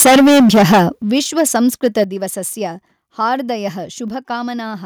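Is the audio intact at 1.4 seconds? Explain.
No. At 1.4 seconds the speech is inside a stretch of microphone overload that runs from 1.15 to 1.56 s. The loudest peaks there have their tops flattened, which adds a harsh, crackling edge. The likely cause is an input level set too high, driving the peaks about 4 dB past the converter's ceiling. Only around one percent of samples are cut, so the distortion rides on the strongest moments.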